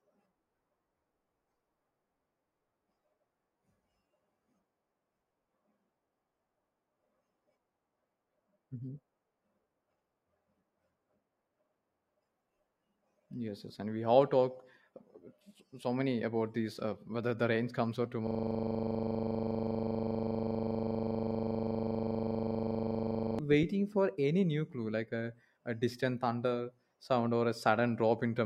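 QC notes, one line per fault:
18.27–23.39 s, system hang loop: right after "comes or", the speech freezes into a steady 25 Hz buzz for about five seconds before resuming with "waiting for any new". The system stalled while the hardware kept replaying one 40 ms stretch of its buffer.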